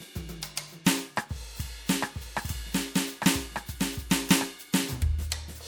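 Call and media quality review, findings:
Music doubled from 2.01 s to 4.49 s. A second full-band copy trails the original by about one second, at roughly equal level, with no decay or room colour. It cuts in and out abruptly at both ends. Doubled audio track. Likely cause: the same feed captured a second time through a slower parallel path, or an edit leaving two out-of-step copies, both summed into the mix.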